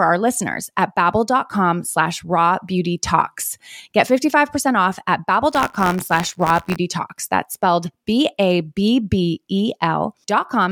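From 5.50 to 6.77 s, buffer tearing splices a sliver of 20 ms-old audio into each period, giving a robotic 86.1 Hz buzz consistent with a 512-sample buffer.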